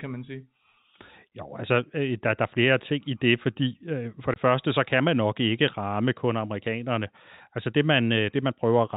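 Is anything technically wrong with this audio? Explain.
Yes, there is one fault: packet loss filled with silence at 4.34 s, between "øh for" and "første så kan man". About 20 ms of audio is missing, which fits a single lost packet. The receiver played silence in the gap instead of concealing it, so the speech drops out abruptly with a hard cut at each edge. On a waveform this looks like a short flat line with steep edges. On a spectrogram it is a thin blank vertical stripe. The telephone-band G.711 coding leaves nothing above 4 kHz, so the stripe sits within that narrow band.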